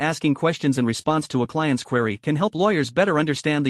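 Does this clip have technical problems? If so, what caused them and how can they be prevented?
Yes. Short concealed packet loss occurs between 1.01 and 1.05 s, after "asking questions in". About 20 ms of audio arrived too late for the decoder, which extrapolated the preceding sound to cover the hole, leaving a brief smear. Prevention: a larger jitter buffer or a less congested network path.

A lost packet rebuilt from error correction follows from 1.05 to 1.11 s, before "to a client's query", and again from 2.57 to 2.59 s, after "client's query can help". These spans of roughly 40 ms and 20 ms fit two frames and then one being played from low-bitrate redundant copies, so they sound rougher and noisier. Prevention: reduce packet loss on the link so the decoder seldom falls back to these copies.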